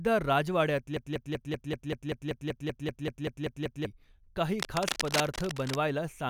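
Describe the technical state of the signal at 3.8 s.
At 3.8 s the signal sits inside a broken-record loop spanning 0.97 to 3.86 s, likely a stalled player resending the last fragment it held. One 0.19 s slice of speech repeats exactly, 15 times back to back, replacing the speech that should have played.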